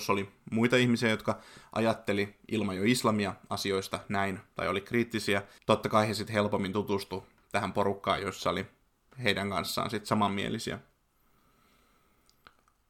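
No technical faults are audible anywhere in the speech recording.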